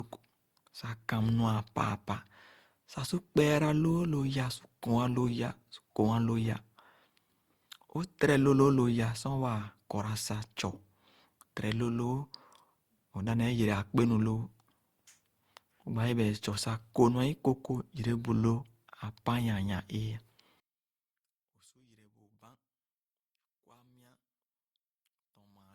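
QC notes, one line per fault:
Throughout: generation loss. The speech has a swirly, smeared, hollow character beyond what a single 64 kbit/s Opus encode would leave, and consonant attacks lose their edges. This is likely the result of repeated decode and re-encode passes, around seven. Each pass quantises again on a shifted frame grid, so coding noise and spectral gaps pile up. The bandwidth still reaches about 20.2 kHz, so the damage shows as texture rather than a dull top end.
20.6 s to the end: one channel inverted. From 20.6 s the speech, which sits centred, drops by about 35 dB and nearly disappears when the channels are summed to mono. Only a faint residue remains. This likely comes from one channel having its polarity reversed. Material common to both sides then cancels in the sum, and only the small difference between the channels is left audible.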